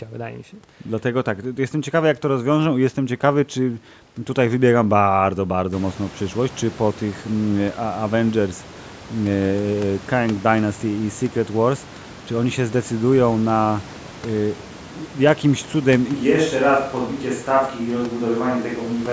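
At 16.13 s, right after "jakimś cudem", the sound turns roomy and hollow, thinner in the bass and a few decibels quieter. This is likely a switch to a distant microphone. It persists to the end.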